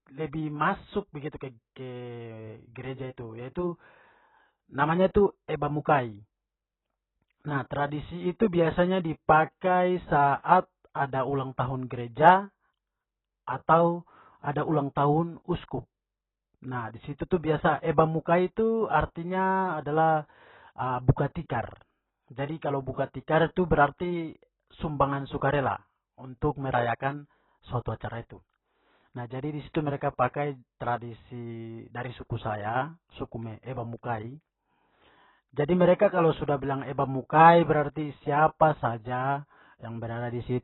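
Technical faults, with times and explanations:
Throughout, AAC compression: a likely AAC-LC encode, consistent with about 16 kbps, removes everything above 4 kHz and starves the remaining bands, so speech sounds dull, smeared and warbling.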